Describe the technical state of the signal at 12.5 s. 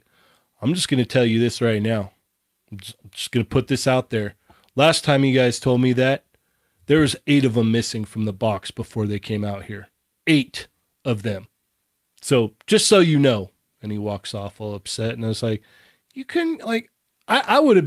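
At 12.5 s the speech signal is intact, with no audible dropout, clipping, distortion or other technical fault.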